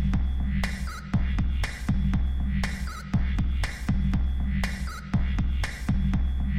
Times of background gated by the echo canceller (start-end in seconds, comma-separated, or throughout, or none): none